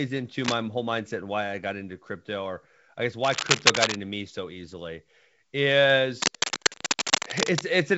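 At 0.39 s a brief burst of cable scratch noise cuts across the speech. It lasts under 0.2 s and sits a little below the voice. The same scratching returns from 3.24 to 3.97 s, and again from 6.22 to 7.61 s. Both later bursts are louder than the speech, by about 5 dB. The dense, uneven crackle is likely a worn cable or connector being moved. Its contact resistance jumps around. This all rides over band-limited G.722 wideband audio that stops near 7.7 kHz.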